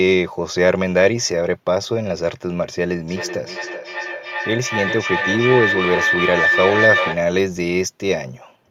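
A microphone-to-loudspeaker loop with more than unity gain, typical of two devices on the same call in one room, causes a feedback howl from 3.08 s to 7.25 s. Each pass through the loop comes back louder and narrower, so the repeats, roughly 0.4 s apart at the loop's round-trip delay, grow into a tone of around 2 kHz. At its peak the howl reaches about 1 dB below the speech level.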